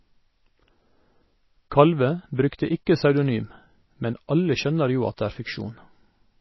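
Throughout the speech, nothing is present above 5.8 kHz, and the sound is plainly watery and swirly, with metallic chirps on sibilants and smeared attacks. This is likely MP3 compression at a starved bitrate, around 24 kbps: the encoder drops the treble and toggles weak frequency lines frame to frame.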